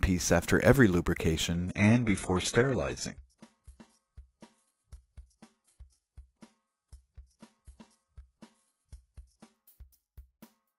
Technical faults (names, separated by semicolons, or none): adaptive stream at a lower bitrate